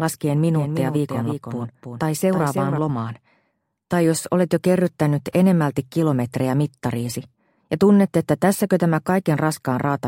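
The audio carries a doubled audio track from 0.54 s to 2.78 s: a second, full-band copy trails around 300 ms behind at roughly 5 dB lower, with no decay or room colouring, and it cuts in and out abruptly. The likely cause is a slower second capture path or a misaligned edit.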